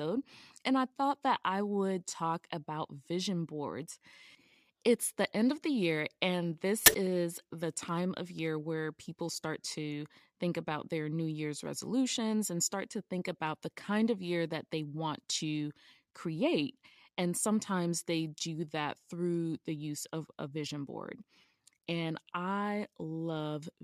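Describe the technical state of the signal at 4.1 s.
At 4.1 s the signal is intact, with no dropout, clipping, distortion or other audible fault.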